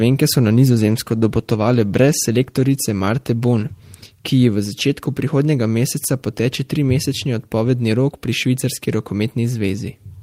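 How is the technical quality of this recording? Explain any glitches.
The recording has one glitch, a call bitrate drop. From 0.57 to 4.19 s, after "so na" and until "ki ji v začetku", the call's bandwidth estimate fell and the encoder coded far more coarsely, consistent with a drop from about 32 to 18 kbps. The speech sounds rough and watery for roughly 3.5 s before recovering.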